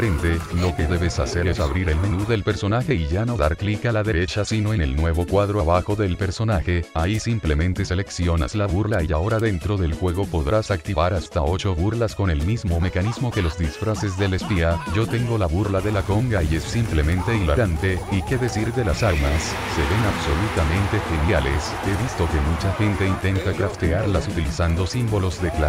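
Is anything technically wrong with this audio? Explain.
No, there are no technical faults to report here.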